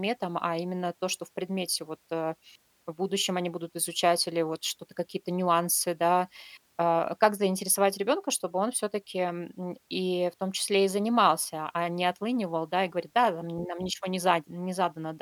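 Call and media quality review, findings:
No call or media quality findings to report for this speech recording.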